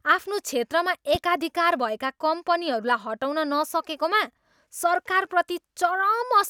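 It's a short speech clip with a single loud pop at 1.15 to 1.18 s, one sharp hit lasting about 30 ms and poking out a few dB above the speech, which keeps going right underneath it without a break. That shape is what you get when a sudden voltage spike lands on the signal path, likely from a plug being nudged, a switch, a static discharge or a brief driver glitch, with the downstream circuitry rounding it into a thump.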